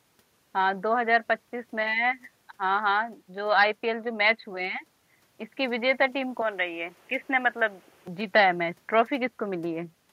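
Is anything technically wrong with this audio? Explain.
Yes. From 6.42 to 8.07 s the speech turns boxy. The input was likely switched to a poorer device that passes a narrower band. A spectrogram shows the upper bands abruptly empty there, over a faint new noise floor. The waveform keeps its level, with no gap at either switch.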